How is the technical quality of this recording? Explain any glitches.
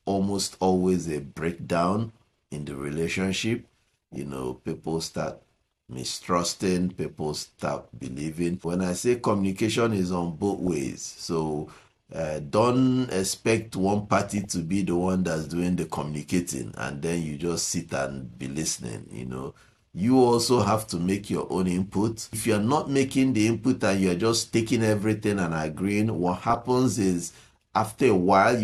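The recording has five short bursts of DAB burbling, at 3.65–4.16 s, 10.59–10.83 s, 14.26–14.53 s, 18.59–18.77 s and 26.28–26.62 s. Weak reception lets a fraction of a percent of bits slip past error correction into the MP2 stream. Corrupted samples put short blips of noise in single sub-bands, and corrupted scale factors make individual sub-bands leap in level for up to a frame. A spectrogram shows blocky, band-limited patches flickering on and off. The waveform shows uneven level jumps.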